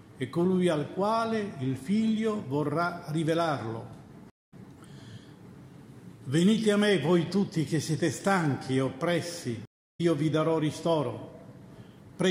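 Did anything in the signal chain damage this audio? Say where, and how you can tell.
Yes. Two stream reconnects at the network stage: silences of 208 ms at 4.30–4.54 s and 324 ms at 9.65–10.01 s. Unlike a plain dropout, the sound resumes further along, skipping roughly 0.1 s and 0.3 s, because the player rejoined the live stream with a fresh decoder.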